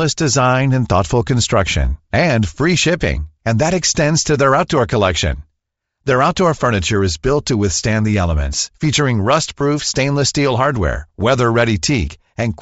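Speech runs through the whole recording with a breathy, grainy edge on the voice and a thin, noise-filled top end. The damage is plainly audible and is likely Bluetooth LC3 compression at a low bitrate. The character fits roughly 32 kbps with 7.5 ms frames, where the encoder zeroes much of the upper spectrum and the decoder fills those bands with shaped noise instead of real detail. Two lost LE Audio frames also appear as brief smeared blips, one at 2.98 s just after "thoughtful construction and free" and another at 9.60 s just after "withstand the elements featuring". Each gap lasts about 7.5 ms, the length of a single frame. The decoder covered each gap by repeating the previous frame's spectrum with randomised signs, so the audio turns momentarily noisy rather than dropping to silence.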